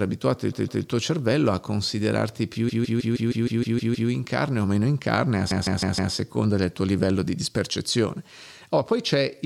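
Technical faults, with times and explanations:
0.51–0.83 s (before "tuo cervello a considerarti"), 2.68–4.09 s (after "cervello a considerarti più") and 5.50–6.13 s (before "del tuo livello di"), repeated frames: a 0.16 s block of compressed frames replays 2, 9 and 4 extra times. Each replay is an identical copy, so the speech stutters mechanically. Unlike a dropout, nothing is lost. The speech is delayed, adding 0.31, 1.41 and 0.63 s.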